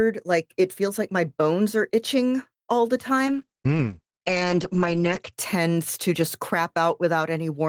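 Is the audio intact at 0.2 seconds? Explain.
Yes, the audio is intact at 0.2 seconds, with no fault to be heard at that moment.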